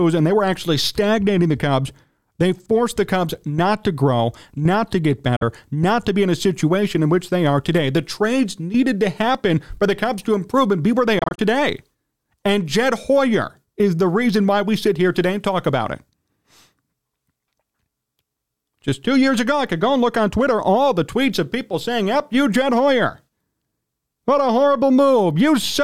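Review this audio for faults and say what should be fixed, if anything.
Bluetooth dropout at 5.36 to 5.43 s, after "grow not to get", and as brief gaps scattered over 11.19 to 11.39 s, after "and be where they": the sound cuts abruptly and resumes further along, likely from wireless packets arriving too late and being discarded. The first hole lasts about 46 ms, and the second totals about 93 ms in pieces of up to 23 ms, which fits whole lost frames. To prevent this, monitor over a wired connection or keep the Bluetooth link short and free of interference.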